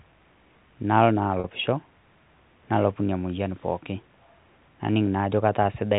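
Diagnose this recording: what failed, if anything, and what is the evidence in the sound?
At 1.40 s the speech briefly hangs on a slightly held, buzzy tone for about 40 ms, ending around 1.44 s before normal sound resumes. This is packet loss with pitch repetition, a network-stage fault. Audio went missing in transit, and the receiver's concealment bridged the gap by looping the last pitch period it had received. The 40 ms gap fits two lost 20 ms packets, heard through the band-limited G.711 telephone coding.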